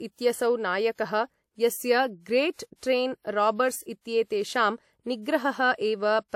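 From start to finish the speech has nothing above about 16.6 kHz, likely low-bitrate audio saved at a high bitrate: the earlier lossy pass stripped detail, and re-encoding can't restore it.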